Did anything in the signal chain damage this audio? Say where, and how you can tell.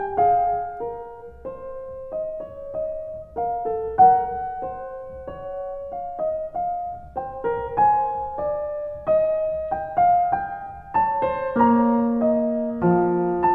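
No, nothing in the signal chain damaged this music.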